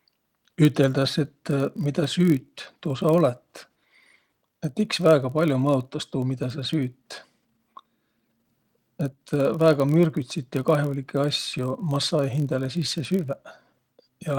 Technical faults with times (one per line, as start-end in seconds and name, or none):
0.00-14.38 block size mismatch (padded)